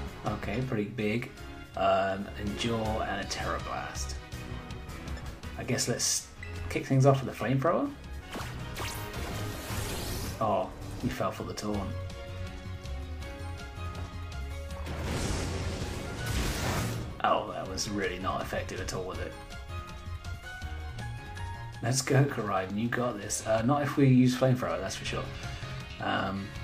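No technical fault can be heard anywhere in this audio. Nothing in the signal calls for a time or a cause.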